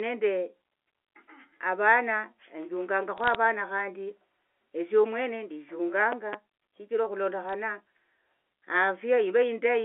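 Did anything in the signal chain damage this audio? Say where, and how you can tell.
Yes. At the network stage there are bit errors on a digital phone line: sharp ticks and crackle from 3.18 to 3.35 s and again at 7.49 to 7.53 s, with the speech intact underneath. Flipped bits in the G.711 mu-law stream, around 0.2% of them, corrupt individual samples.

There's also a loud pop in the analogue wiring: a double pop between 6.12 and 6.36 s, peaking about 10 dB above the speech, which carries on beneath it. That's likely a voltage spike from a plug, switch or static discharge, shaped by the downstream circuits into a pop.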